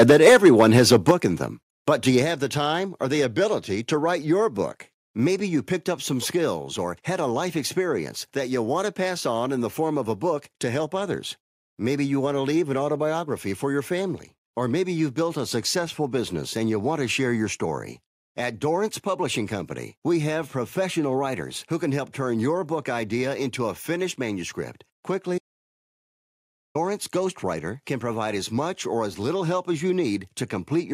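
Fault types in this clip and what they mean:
Microphone overload: For the first 1.1 seconds the peaks slam into the converter's ceiling, pushing about 8 dB past it with a few percent of samples flattened. That gives the loudest syllables a harsh, crackly edge. The likely cause is the mic input level set too high.
Microphone volume stepped down: The level drops abruptly in single steps of about 3 dB at 0.12 s, 7 dB at 1.11 s just before "in them", 4 dB at 2.22 s, and 1 dB at 5.28 s between "to write your book" and "you picked up some". Likely the call software trimming an input it found too hot.
Audio dropout to silence: At 25.38 s, right after "into a finished manuscript", the sound cuts to dead silence with no room tone for about 1.37 s. It returns at 26.75 s on "ghostwriter can provide as", and whatever was said in between is gone. The likely cause is the input briefly disconnecting or muting.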